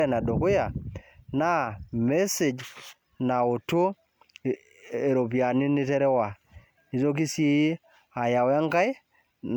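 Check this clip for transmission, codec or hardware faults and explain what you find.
One codec fault is present throughout this speech recording. Generation loss: the speech sounds swirly, hollow and smeared, with blurred consonant attacks and nothing above 19.9 kHz. This likely comes from repeated MP3 re-encoding, around seven passes at what sounds like 128 kbit/s. Each pass requantises on a shifted frame grid, so noise and spectral holes accumulate. A single encode at that rate would sound far cleaner.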